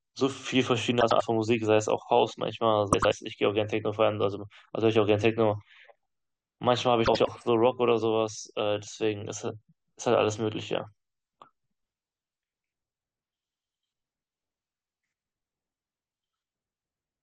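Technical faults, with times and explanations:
1.01–1.22 s, 2.93–3.14 s and 7.05–7.29 s: frames out of order. In each stretch, two adjacent blocks of roughly 96 ms play swapped, which points to runs of four frames exchanged in transmission. The speech briefly jumbles into a garbled flutter. On a spectrogram, formant tracks break and resume misaligned. Total duration is unchanged.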